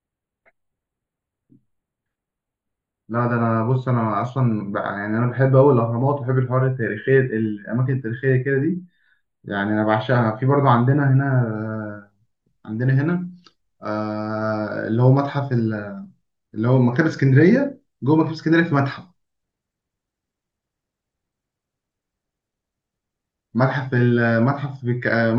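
From 0 to 11.56 s there's channel delay (comb filtering): one side lags by roughly a tenth of a millisecond, so the mono sum notches near 5 kHz and speech turns hollow.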